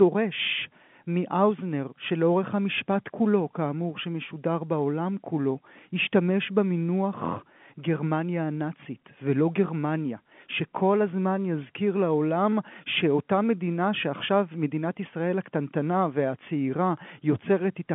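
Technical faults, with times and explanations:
No technical faults detected.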